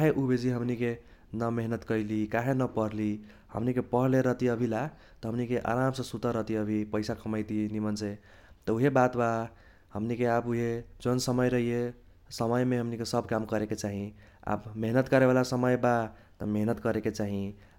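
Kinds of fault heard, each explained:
No technical faults can be heard in this speech recording. There is nothing in the audio to list under any kind of fault.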